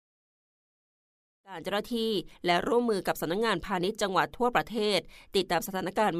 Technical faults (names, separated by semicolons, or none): none